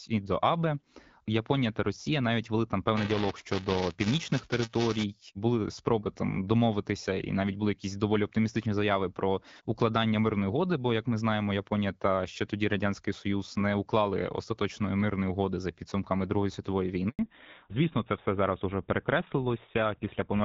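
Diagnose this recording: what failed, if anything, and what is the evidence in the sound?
The network stage hiccups at 17.09 s with a handover gap. The speech dies away within a few tens of milliseconds and stays silent for 100 ms, until 17.19 s, then resumes. That's the call being passed from one network to another: during the switch no speech frames get delivered, so the decoder has nothing to play and whatever was said in that window is simply gone.

Right after, from 17.19 s to the end, you get a fallback to narrowband, a codec-stage change. Before the gap the voice has the light, clear wideband character you'd expect from HD Voice around 12.65 kbit/s. After it, nothing above 4 kHz survives, so the speech goes dull and rougher. The new link negotiated an older narrowband codec, and the sound fits GSM full rate.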